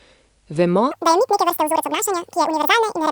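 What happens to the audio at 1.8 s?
At 1.8 s you're inside a wrong sample rate stretch from 0.91 s to the end. Playback runs double speed, an octave high, which fits 22 kHz audio played at 44.1 kHz.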